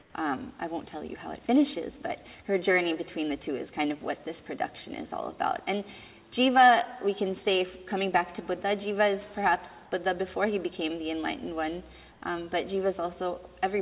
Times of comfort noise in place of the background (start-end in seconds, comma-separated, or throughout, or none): 0.00-0.14, 12.12-12.22